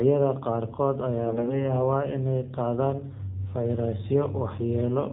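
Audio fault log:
throughout AMR narrowband mobile codec: audio cut off above 4 kHz, speech rebuilt from a pulse-driven vocal-tract model at 7.4 kbps, so it sounds plainly buzzy and synthetic.
1.26–1.74 s AMR bit errors: before "inay qaadaan", around a tenth of the weakly protected bits arrive flipped, misplacing excitation pulses; pitch and level hold but speech turns hoarse and gargly.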